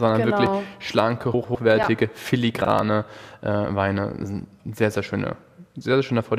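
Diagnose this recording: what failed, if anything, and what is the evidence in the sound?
Buffer stage: a block of digital silence at 0.46 s, 1.83 to 1.84 s and 2.79 s. The output was likely not filled in time. Each gap is under 15 ms, so it is heard as a tick or dip.

Network or packet ordering: frames out of order at 1.34 to 1.55 s and 2.62 to 2.67 s. Each stretch plays with its halves swapped. It flutters.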